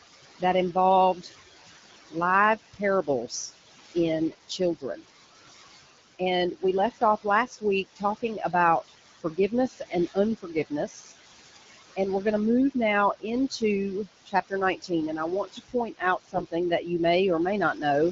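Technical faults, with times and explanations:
Throughout: noise suppressor artifacts. The room noise, about 10 dB below the speech, is pulled down by about 16 dB in gaps and returns under the speech, so the background pumps. The suppressor works band by band, frame by frame.
0.39–1.3 s, 2.73–5.05 s, 6.19–11.13 s, 11.96–16.87 s, 17.74–17.84 s: speech cut by the noise suppressor. Soft consonants and word tails are misjudged as noise and attenuated by about 14, 19, 20, 19 and 8 dB at worst. Roughly a second of speech is affected in each of the two longest spans, and they sound swallowed or faint.
16.25–16.43 s: AMR bit errors. For about 180 ms, poorly protected bits in the codec frames arrive corrupted, at a fairly high error rate, while the protected core still decodes. Misplaced excitation pulses and wrong fine parameters make the speech hoarse and gargly, though pitch and level hold roughly steady.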